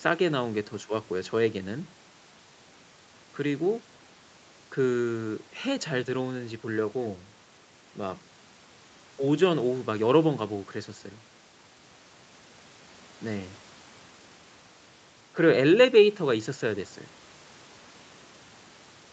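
No technical faults detected.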